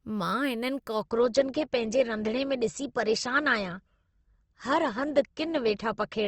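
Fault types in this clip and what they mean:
Adaptive stream at a lower bitrate: from 1.01 s to the end the speech abruptly loses its upper treble, with nothing above 8.1 kHz and more codec artefacts. That fits a switch from 64 kbit/s to 16 kbit/s Opus. Unlike a dropout, there is no gap.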